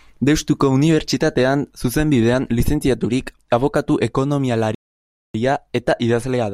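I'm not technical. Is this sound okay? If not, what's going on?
No. At 4.75 s the speech cuts to silence for 0.6 s, resuming at 5.34 s: a playback stall, likely the player briefly running out of audio data.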